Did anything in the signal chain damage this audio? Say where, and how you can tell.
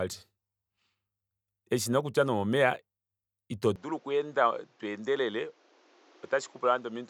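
Yes. At 3.76 s the speech abruptly turns duller and stays that way to the end, with nothing above 7.7 kHz, a drop of about 5 dB and a new noise floor roughly 35 dB down. This is likely an input switched to a poorer device at the driver stage. A codec bandwidth cut would narrow the band without also changing level and background noise at the same instant.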